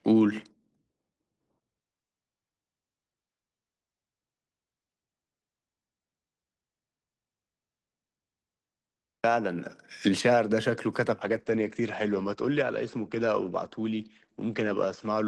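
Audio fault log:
11.21–15.27 s, call bitrate drop: the Opus call audio turns coarse and muffled as the band narrows from 12 kHz to 8 kHz, consistent with roughly 32 falling to 12 kbps, continuous with no gaps, unlike packet loss.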